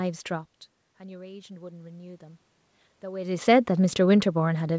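Speech, heard through a call path with nothing above 8 kHz, which points to a wideband codec such as G.722. The talker shifts position near half a second and again around 3 s. The fault is automatic gain rising. The input level fell by about 18 dB. From 0.98 to 2.48 s, the gain control slowly raised its gain by about 4 dB. Voice and room noise swell together over those 1.5 seconds.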